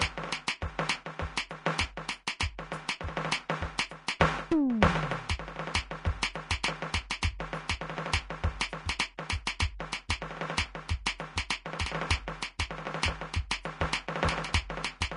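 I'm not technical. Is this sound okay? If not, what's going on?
No. Throughout the music, the top end stops at about 10.6 kHz, and what treble remains sounds hissy and grainy, with roughened tones and softened attacks. That points to Vorbis compression, likely squeezed hard. A simple treble cut would sound dull but clean, without this grain.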